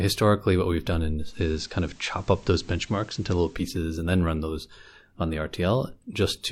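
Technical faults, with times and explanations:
1.16–3.71 s, digital radio blending to analogue: just after "what we've done", a steady hiss sits roughly 30 dB below the speech, and the level shifts by about 1 dB. It clears before "and then run those". The receiver lost its digital signal and cross-faded over 265 ms to the station's FM broadcast, whose noise floor adds the hiss, then faded back.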